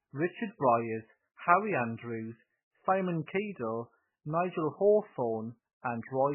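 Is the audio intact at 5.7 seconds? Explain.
No. At 5.7 seconds, as across the whole clip, the speech sounds watery and swirly, with nothing above 3 kHz, so consonants like s lose their hiss and come through dull and smeared. This is likely MP3 compression at a very low bitrate, in the region of 8 kbps: starved of bits, the encoder chops off the treble at a fixed point and drops weaker frequency lines that flicker in and out between frames, producing that swirl.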